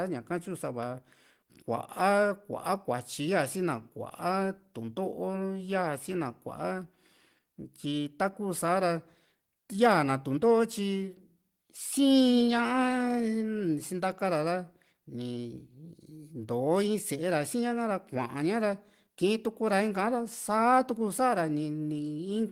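Speech runs with slight hiccups and an unsteady tempo, caused by clock drift between sender and receiver: the sender's clock runs about five percent fast, so the receiver's buffer keeps overfilling. From 0.09 s to 22.48 s, repeated timing corrections trim short pieces at uneven intervals, all in the same direction, so the audio plays back about 105 percent as fast.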